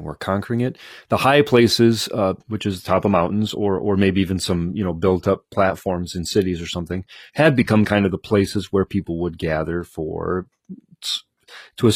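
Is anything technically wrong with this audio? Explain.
Yes. At 2.44 s, after "high places uh", a slowed connection drops the adaptive stream to a lower bitrate. Treble stops at 14.9 kHz and turns synthetic, abruptly but without the gap rebuffering leaves.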